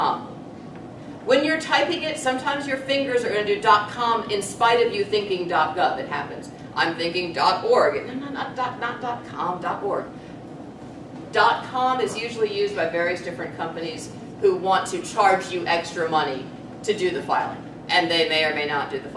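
Nothing goes wrong anywhere in the clip; there's simply no technical fault to point to.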